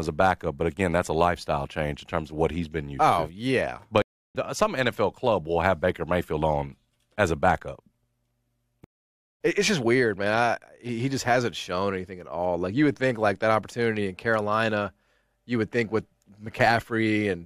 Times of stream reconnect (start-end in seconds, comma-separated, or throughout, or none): 4.02-4.35, 8.84-9.40